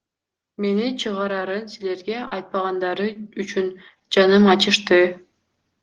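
Right around 1.39 to 1.43 s there's a short concealed packet loss. About 20 ms of the call didn't arrive in time, so the receiver papered over the hole by carrying the last bit of sound forward, from its pitch if voiced and as shaped noise if not, before blending back into the real signal. You hear it as a quick smear or little wobble rather than a clean dropout.

From 1.79 s the automatic gain starts rising. The gain control decided the input was too quiet and slowly pushed its gain up by about 12 dB, finishing around 5.2 s. Because it's acting on the whole signal, the voice and the background noise swell together over those few seconds, rather than the talker just getting louder.

While that rise is under way, two more concealed packet losses turn up. The one at 2.27 to 2.33 s is the longest, with about 40 ms filled in. That's long enough that the synthetic continuation gets smeary, and a short consonant in there could easily get swallowed. 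Another 20 ms gap at 3.13 to 3.17 s sounds much like the first, a brief blur as the decoder stitches its guess back into the real audio.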